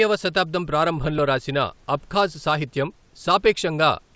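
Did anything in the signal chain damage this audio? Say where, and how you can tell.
No, nothing along the chain has hurt this speech: the call path's wideband coding leaves nothing above 8 kHz, which fits a G.722 link, and the faint room noise sits about 42 dB below the talking.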